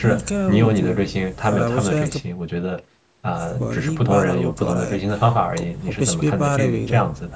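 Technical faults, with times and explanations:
None found; the call microphone processing sounds as expected.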